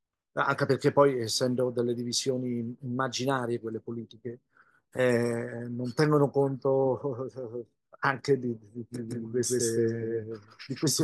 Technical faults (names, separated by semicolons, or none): doubled audio track